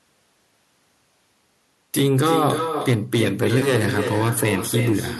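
A speech clip with an echo with no canceller running through its whole length. Each phrase is followed by a second copy arriving around 300 ms later. That copy sits about 6 dB below the direct speech. It sounds thinner than the original. The far end is playing the call through a loudspeaker, and its microphone picks that sound up again. Nothing removes it before it travels back, so the round trip through the network adds the delay.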